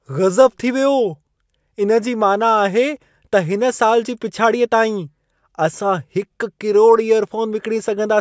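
Nothing stood out on listening to this speech recording.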